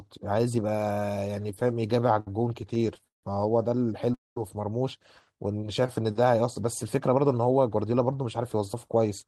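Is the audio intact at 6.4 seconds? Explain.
Yes, the speech at 6.4 seconds is intact, with no audible fault at that moment.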